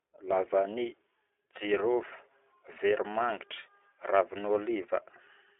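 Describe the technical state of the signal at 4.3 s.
At 4.3 s the speech is carrying iLBC codec damage, present across the whole clip. Each 20 ms frame's excitation is coded independently of the previous frame, giving a plainly audible rough, synthetic edge; the coarseness fits the 15.2 kbps mode. The signal sits in a telephone band of roughly 150 Hz to 3.5 kHz. A spectrogram would show a hard ceiling with nothing above 3.7 kHz and little energy below 150 Hz.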